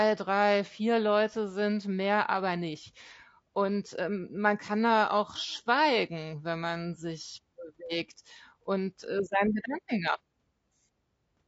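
All the way through, the speech has a rough, grainy edge, with a hiss filling the gaps between the harmonics and a top end that sounds thin and a bit synthetic. That's likely low-delay AAC compression, and the damage plainly points to a tight bitrate, around 32 kbps.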